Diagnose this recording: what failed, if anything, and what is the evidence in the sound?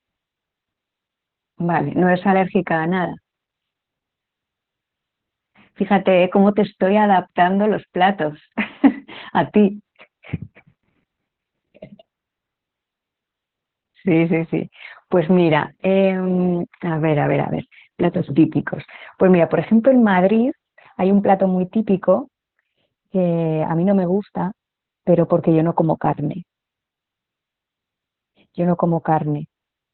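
Speech sounds muffled, hoarse and faintly robotic throughout, with nothing above 4.2 kHz: heavy Opus voice compression, narrowband SILK coding consistent with about 8 kbps.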